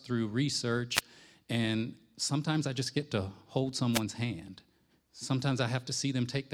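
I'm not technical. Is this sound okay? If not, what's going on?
No. Twice there is a short burst of static, at about 0.94 to 1.01 seconds and again at about 3.92 to 4.01 seconds. Each lasts less than a tenth of a second. This is a wireless microphone noise hit. The radio signal from the microphone to its receiver fades for a moment, and the receiver's own hiss rises until the signal returns.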